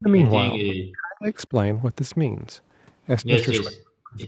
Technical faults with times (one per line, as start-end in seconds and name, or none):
0.00-0.23 speech suppressed in double talk
0.09-0.29 echo leak
0.59-1.28 speech suppressed in double talk
3.63-4.24 speech suppressed in double talk